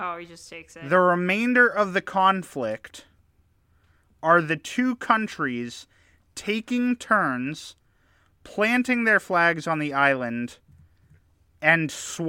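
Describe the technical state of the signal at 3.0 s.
The speech at 3.0 s is intact, with no fault audible at that moment.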